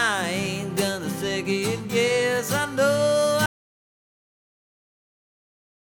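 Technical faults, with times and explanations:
3.46 s to the end: audio dropout to silence. The sound cuts off abruptly mid-flow and never returns, leaving dead digital silence with no room tone for the final 2.3 s. This likely comes from the input being lost while the recorder kept writing silence.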